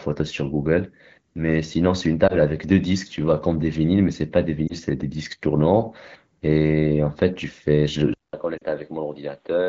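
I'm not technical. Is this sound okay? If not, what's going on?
No. Two separate problems can be heard.

The first is lost AMR speech frames. Radio errors corrupted small pieces of the phone signal, and the receiving end filled each gap by repeating what it last heard, a little quieter. You hear a brief dip or wobble at 2.27 s and at 4.68 s. At 8.58 s two pieces in a row were lost, so that hiccup is slightly longer. After each one the voice comes back weak or rough for a moment.

The second is an input switched to a poorer device, likely because the phone changed microphones or moved to a headset partway through. At 8.14 s there is a gap of about a fifth of a second. After that, to the end, the sound is muffled, with nothing above about 4.6 kHz. It is also noticeably quieter and has faint new background noise.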